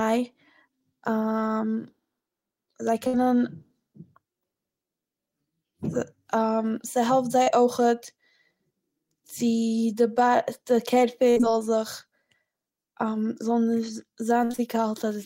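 A burst of packet loss hits this speech clip at 3.07 to 3.15 s. About 60 ms of audio never arrived, and the receiver stretched the last sound across the hole while fading it, so a brief held buzz or hiss covers the gap before the speech resumes further on. A short concealed packet loss at 7.42 to 7.48 s drops about 40 ms; the decoder patches it by continuing the preceding sound, then blends back, leaving a quick smear or wobble. Repeated packet loss (robotic sound) appears at 11.30 to 11.53 s and again at 14.44 to 14.60 s, each with three dropouts in close succession, the longest 58 ms and 52 ms. Over half of each stretch is synthesized fill, giving a choppy texture with fragments missing.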